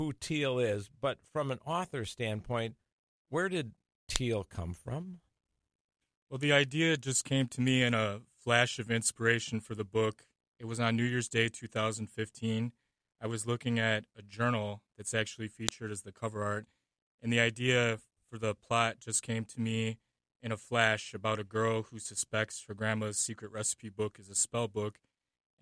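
At 4.16 s a sharp, loud click snaps out. Another hits at 15.69 s. Each is a file header played as audio. Separate WAV pieces were joined with their headers left in. Those header bytes play as raw samples, a brief snap regardless of the surrounding sound.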